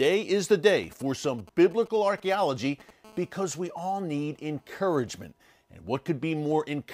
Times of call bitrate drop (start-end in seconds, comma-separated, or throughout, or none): none